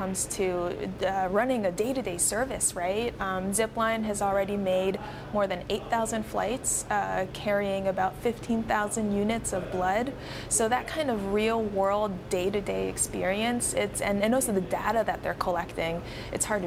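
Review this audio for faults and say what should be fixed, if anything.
Nothing to fix: no faults audible anywhere in this audio.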